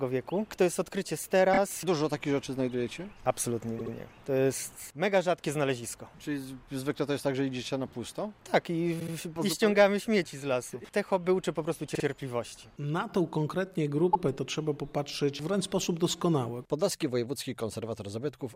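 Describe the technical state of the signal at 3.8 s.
Right at that point there's a repeated frames stutter, running from about 3.78 to 3.93 s. A 72 ms chunk, which fits roughly three compressed frames, gets played twice more, so you hear it stutter, and the audio runs 144 ms longer.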